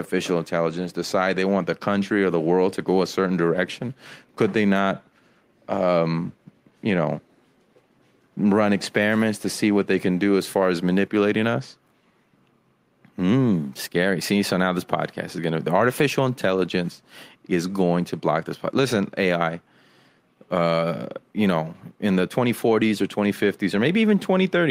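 No technical faults can be heard anywhere in the speech.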